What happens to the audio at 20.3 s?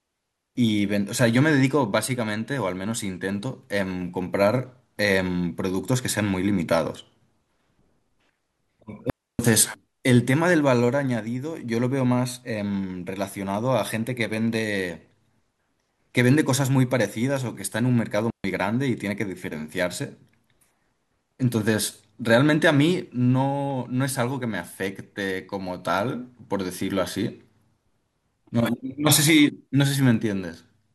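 Nothing goes wrong at 20.3 s; the speech carries on intact through that moment with no audible dropout, click or distortion.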